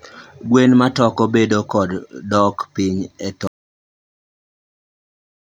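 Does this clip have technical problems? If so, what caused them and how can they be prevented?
Yes. At 3.47 s the speech cuts to silence, no room tone, through to the end: an audio dropout to silence, likely a lost input while recording continued. Check cables and mute states before rolling.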